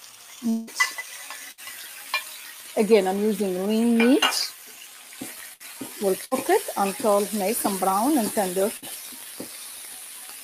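Throughout, held and fading sound swells and sinks by around 10 dB while attacks pass, a pumping thinness from a noise suppressor applied to music or sounds that treats sustained tones as noise.

From 0.0 to 0.31 s the sound dips by about 4 dB, cut by the noise suppressor, which mistook it for noise and pulled it down more than the rest.

From 0.49 to 0.70 s the sound turns into a continued, fading buzz or hiss for about 180 ms and resumes further on with that stretch missing. This is likely a long network dropout concealed by the receiver.

At 1.51 s a short held buzz or hiss fades out before the sound picks up again with roughly 60 ms gone. This is a burst of packet loss, papered over by continuing the last sound.

From 4.87 to 5.15 s the sound is again cut by the noise suppressor, sinking about 4 dB.

The same burst of packet loss recurs at 5.54, 6.25 and 8.77 s, each a brief fading buzz or hiss over about 60 ms of lost audio.

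From 9.12 s to the end, the noise suppressor again pulls the sound down by about 4 dB.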